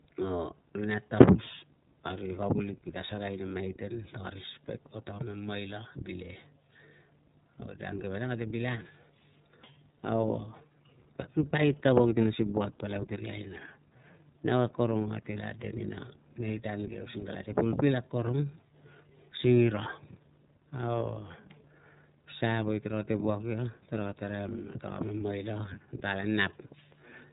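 iLBC codec damage runs throughout the speech, plainly audible. Each frame's excitation is coded independently, which leaves a slightly rough, synthetic texture, and nothing passes above 3.8 kHz, giving a narrowband, muffled top. The sound points to the 30 ms, 13.33 kbps mode.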